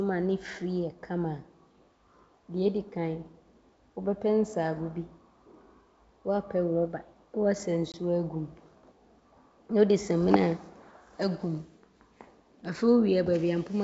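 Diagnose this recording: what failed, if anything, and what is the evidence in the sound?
The network stage failed, causing packet loss on an ADPCM call. At 7.92 s the speech drops into a hard-edged silent gap lasting 20 ms, which points to about two packets going missing. When the audio resumes at 7.95 s, it comes back slightly distorted. The decoder's predictor and step size had drifted from the sender's during the gap and needed a few tens of milliseconds to resynchronise. That recovery artefact distinguishes it from a simple dropout or buffer underrun, and it stands out against the clean 7 kHz band of the G.722 coding.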